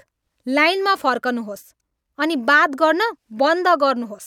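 A speech recording, and nothing is technically wrong with it.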